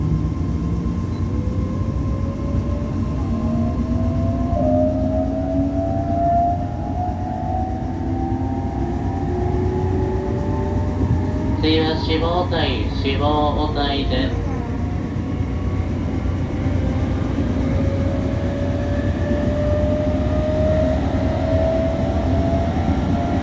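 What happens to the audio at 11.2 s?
Nothing goes wrong at 11.2 s; the audio plays through that moment intact, with no dropout, click, glitch or distortion to be heard.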